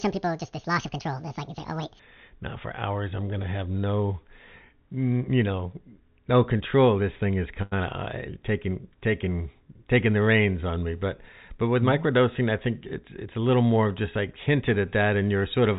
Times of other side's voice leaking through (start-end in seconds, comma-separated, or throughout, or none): none